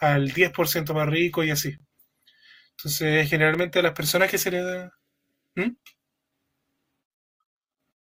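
Speech clip with a block of digital silence at 3.54 s: about 3.7 ms of audio drops out with no fade, heard as a tick. A waveform shows a flat line, and a spectrogram a thin broadband stripe at each edge.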